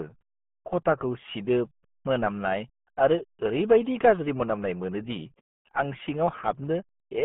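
Throughout, the speech carries RealAudio 14.4 codec damage. The sound has the heavy, gargly smearing of a dial-up-era speech coder, which fits a rate near 8 kbit/s. A spectrogram shows energy confined to roughly 150 Hz to 3.4 kHz, with nothing above 3.6 kHz.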